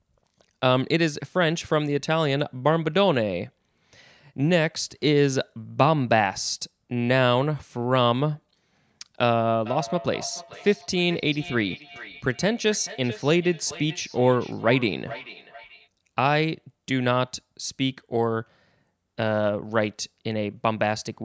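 Speech clip with feedback echo between two devices from 9.66 to 15.89 s. A second device in the room plays the call audio back into a microphone whose echo canceller cannot remove it, so the speech returns roughly every 0.4 s, peaking at about 16 dB below the direct speech. On a spectrogram, faint copies of each syllable's harmonics trail it at that spacing; the waveform shows smaller ghost envelopes between bursts, all below the 8 kHz ceiling of the call's microphone processing.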